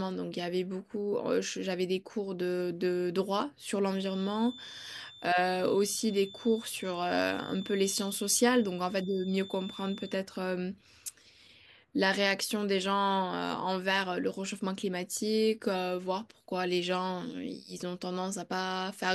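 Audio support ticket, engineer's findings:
Feedback whistle, 3.83 to 10.25 s. Thin, steady 3.5 kHz tone roughly 20 dB under the speech, level swelling and fading slowly. Likely cause: loudspeaker-to-mic loop held at the edge of instability, so one frequency keeps ringing without building further.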